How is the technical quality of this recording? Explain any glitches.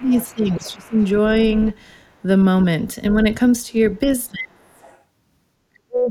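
The recording has clear echo-control problems, with the talker's speech suppressed in places and the far side leaking through.

Speech suppressed in double talk occurs at 0.0 to 0.93 s, 4.06 to 4.82 s and 5.69 to 6.11 s. The voice dips, by about 15 dB at first and by around 35 to 40 dB later. The likely cause is an echo canceller that could not separate the talker from the loudspeaker echo while both spoke, so it turned both down.

The other side's voice leaking through is heard at 0.0 to 1.07 s, 1.57 to 1.74 s, 3.10 to 3.14 s and 4.72 to 5.01 s. It is a faint second voice, about 20 to 30 dB below the speech, and comes through in scraps. The likely cause is echo cancellation that left some loudspeaker playback in the microphone signal.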